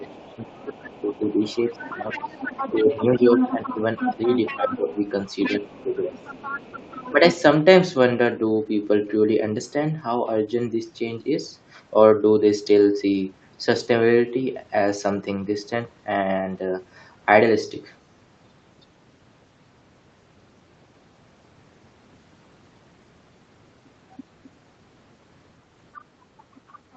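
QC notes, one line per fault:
0.0–4.89 s, 5.6–6.33 s, 7.11–7.37 s, speech suppressed in double talk: with both sides talking at once, the echo canceller likely mistook the talker for loudspeaker echo and turned everything down. The speech dips by up to about 15 dB for roughly 3 s early on, then briefer dips of about 10 dB.
0.15–7.12 s and 25.93–26.96 s, other side's voice leaking through: the echo canceller likely left part of the loudspeaker playback in the microphone signal, so a second, quieter voice sits about 10 dB under the talker.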